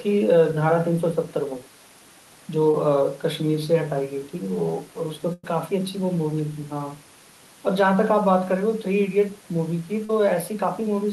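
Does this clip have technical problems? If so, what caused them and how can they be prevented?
Yes. Short concealed packet loss occurs at 2.71 to 2.75 s and again at 10.05 to 10.11 s. About 20 ms and then about 40 ms of the speech stream arrived too late for the decoder. The receiver filled each gap by extending the preceding sound and then crossfading back into real audio, which leaves a brief smear or wobble. This can be prevented by using a larger adaptive jitter buffer or forward error correction on the sending side.

A burst of packet loss occurs at 5.33 to 5.45 s. Roughly 100 ms in a row went missing, so the receiver had to continue the last sound for nearly that whole stretch while fading it down. This produces a held buzz or dying hiss, and the speech resumes further on with the intervening part gone. This can be prevented by improving network stability, for example with a wired connection or QoS priority for voice traffic, and by adding redundancy or FEC so that consecutive losses can be recovered.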